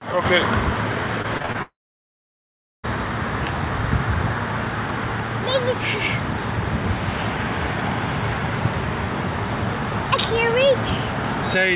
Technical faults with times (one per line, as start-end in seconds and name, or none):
1.22-1.56 repeated packet loss (robotic sound)
1.62-2.85 long network dropout